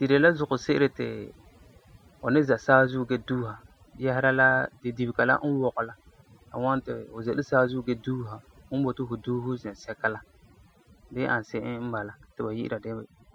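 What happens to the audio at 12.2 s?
At 12.2 s the speech still carries overdone noise removal, present throughout the clip: over-aggressive band gating leaves near-silent, twinkling background and strips away quiet parts of the voice.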